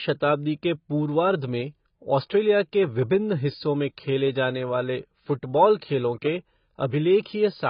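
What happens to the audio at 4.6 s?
At 4.6 s the speech carries the same heavy damage from likely AAC compression that runs through the whole clip. The encoder splits the signal into frequency lines and, starved of bits, discards whatever the hearing model ranks least audible. Nothing survives above 5 kHz, so the speech sounds dull and muffled, with smeared, warbling sustained sounds and fizzy sibilants. That degree of loss fits a very low bitrate, around 16 kbps.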